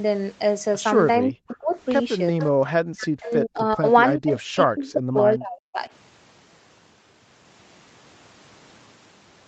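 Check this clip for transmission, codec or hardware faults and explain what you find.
Two faults are present, both likely from an echo canceller.

Speech suppressed in double talk runs from 1.21 to 1.76 s, 2.31 to 2.39 s, 2.82 to 3.85 s and 4.17 to 5.8 s. The speech dips by as much as about 40 dB. The likely cause is the canceller turning everything down while both sides talked.

Echo leak appears at 1.50 to 1.55 s and 2.39 to 2.46 s. A copy of the speech returns about 400 ms late. It is very quiet at first and only about 10 dB down the second time. Loudspeaker pickup likely slipped past cancellation.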